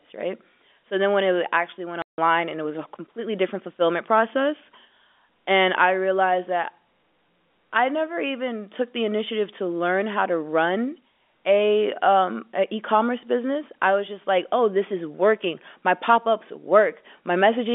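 At 2.02 s, right after "when it actually went", the speech drops out completely for 160 ms, and it picks back up at 2.18 s with "and it was a". That's packet loss filled with silence. A run of packets never arrived, and the receiver played dead air instead. The gap length fits a string of 20 ms packets. Both edges are abrupt, cutting across the narrow 250 Hz to 3.5 kHz phone band of the G.711 line.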